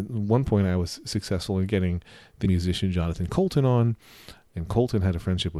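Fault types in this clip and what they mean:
Compressed frames skipped: Whole blocks of the coded audio never reach the output, either missing or rejected by the decoder as damaged. At 2.45 s, right after "was successful in getting", the speech jumps forward by roughly 0.4 s. The jump fits about fifteen frames of roughly 26 ms each.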